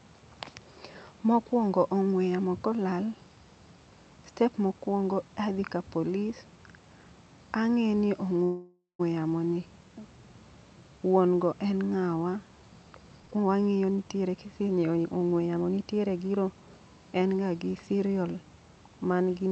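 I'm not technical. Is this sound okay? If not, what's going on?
No. At 8.43 s, right after "ang'e ni", there's a call audio freeze, likely caused by delayed network packets. The call software filled the wait by stretching the last sound into a fading buzz or hiss, ending in a brief silence. The sound then resumes at "yamo ni" at 9.01 s, about half a second late, with nothing lost.

From 13.2 to 15.7 s, just before "nitiere zero", there's a jitter buffer speed-up. The receiver had stored too much audio, so it trimmed many tiny slices to catch up, about half a second in total. The speech runs roughly 22% faster without sounding higher-pitched, so it comes across as hurried.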